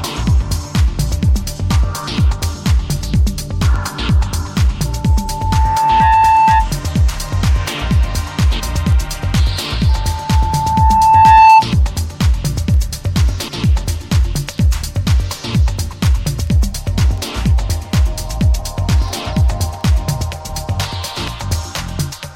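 Loudspeaker feedback squeal at 4.85–6.73 s and 9.89–11.67 s: the speaker loops back into the microphone, so one 883 Hz tone swells over a second or so, louder the second time, unlike a steady whistle.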